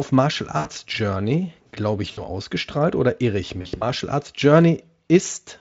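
VoIP packet loss concealed by the speech codec hits at 0.57–0.68 s, at 2.11–2.22 s just before "ausgestrahlt oder irre ich", and at 3.61–3.83 s after it, where short dropouts scatter. The decoder extends its last pitch into a buzzy, fading tone. Spectrograms show smeared harmonics; waveforms, decaying repetition.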